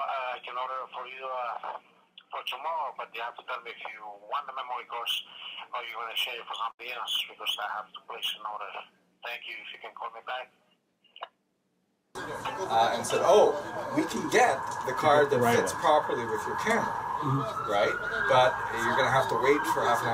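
At 6.71 s there is a burst of packet loss lasting about 90 ms. The receiver stretches the last sound, fading it, then audio resumes with roughly 80 ms missing.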